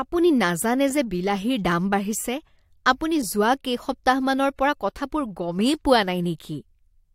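No faults turn up here: a short stretch of speech, and nothing in it sounds technically off.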